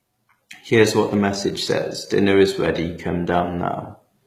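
It's a short speech clip with plainly audible codec damage all the way through, and it sounds like HE-AAC compression. The top end stays bright but doesn't sound like the real thing. The treble comes across as synthetic, with a gritty, metallic edge on the s sounds. That's likely spectral band replication patching copied low bands upward under a coarse envelope, which fits a very low bitrate of around 20 kbps.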